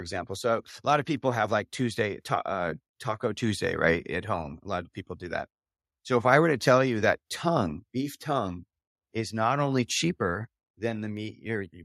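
Nothing technically wrong turns up anywhere in this short bit of speech, so there's no fault here to time or trace to a cause.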